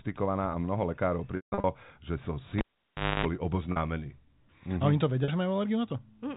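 Packet loss with pitch repetition first appears at 1.36 to 1.64 s, where about 240 ms of speech goes missing in pieces scattered across 280 ms, a pattern that fits a dozen 20 ms packets. Each gap is bridged by repeating the last pitch period, which sounds like a briefly held, buzzy tone. The longest run, 160 ms, outlasts the roughly 50 ms fade, so that stretch dies into silence before the speech cross-fades back in.

A cable pulled and plugged in follows at 2.58 to 3.26 s. A pop marks the disconnection, then near silence for about 0.62 s. As the plug goes back in, its tip touches first and picks up about 0.26 s of 50 Hz mains buzz. A second pop sounds when the connection seats and the speech returns, still limited to the 4 kHz ceiling of the G.711 telephone coding.

Two more short packet losses occur at 3.72 s and 5.24 s, each about 40 ms long, which points to two lost packets apiece. Both gaps are shorter than the fade, so the repeated pitch period never decays to silence. 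Instead each one is heard as a brief, slightly held buzz in the speech.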